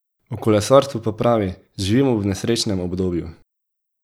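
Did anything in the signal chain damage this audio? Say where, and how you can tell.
No, this speech recording shows no damage from any stage of the signal chain. Nothing in it points to trouble in the wiring, conversion, processing, transmission, storage or playback.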